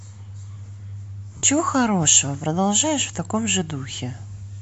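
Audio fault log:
1.37–1.43 s lost LE Audio frames: about 60 ms of the speech drops out, a gap that fits six 10 ms frames, and the decoder covers it by replaying the last good spectrum with scrambled phase signs, lowering its level after the first few frames. The result is a short, noise-like smear instead of clean speech. On a spectrogram, harmonics blur into a grainy band that thins toward the end. On the waveform, a noisy, tapering patch breaks the speech envelope.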